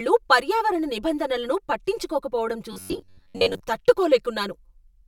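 From the very start and all the way through, the speech has a hollow, phasey quality, which is channel delay with comb filtering. One channel lags the other by around 5 ms, and when the two get folded down to mono, whatever they share cancels at regularly spaced frequencies. The first notch sits somewhere near 100 Hz, with more stacked above it, which is why everything sounds hollow.

Between 2.73 and 3.63 s the speech suddenly goes rigid and metallic, a flat buzz at 93.8 Hz that still loosely tracks the syllables. That's the robotic sound from repeated short buffers, likely caused by audio showing up too late, so the playback kept looping the last short chunk instead. Most of that stretch is repeats, and a loop period of roughly 10.7 ms is what pins the pitch there.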